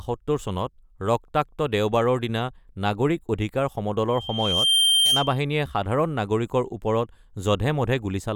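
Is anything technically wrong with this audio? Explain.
Yes, there is loudspeaker feedback squeal from 4.08 to 5.41 s. The microphone re-captures its own loudspeaker, and at 3.2 kHz the loop gain exceeds one, so a pure tone swells over roughly three-quarters of a second to about 5 dB above the speech. A spectrogram shows a brightening horizontal line at 3.2 kHz, and the waveform envelope bulges.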